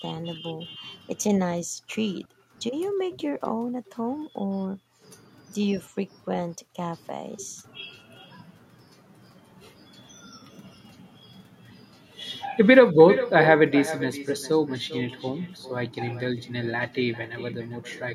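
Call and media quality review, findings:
Echo with no canceller, throughout. Every phrase is followed by a quieter, thinner copy about 12 dB down, trailing by roughly 0.4 s. Probable component is the far-end loudspeaker-to-microphone path with no acoustic echo cancellation. The speech plays out on the far side, is re-captured, and returns across the network round trip unremoved.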